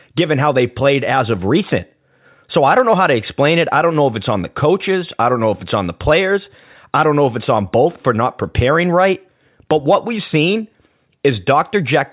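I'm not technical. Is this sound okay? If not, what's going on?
Yes, nothing stood out as a problem when listening to this recording.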